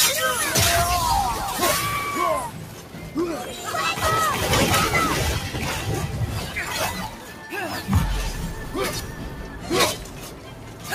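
The sound has a noise suppressor applied to music or sounds, a processor built for speech. It treats sustained and ambient parts as noise. Level rises and falls by around 10 dB, so held parts pump and thin while sudden onsets pass through. Sound cut by the noise suppressor shows up at 2.5–3.15 s, 7.08–7.46 s, 9.13–9.7 s and 10.03–10.87 s. In each stretch the level sinks by up to about 5 dB. Steady or fading material there dips, and tails are cut short.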